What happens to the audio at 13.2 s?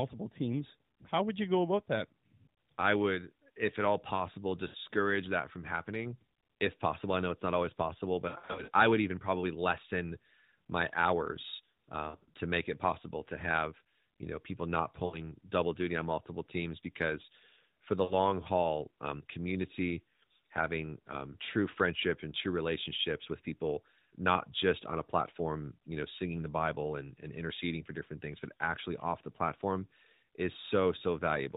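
Nothing goes wrong at 13.2 s: the speech carries straight through that moment with no dropout, click or distortion, only the band-limited sound of the AMR narrowband mobile codec running at 12.2 kbps.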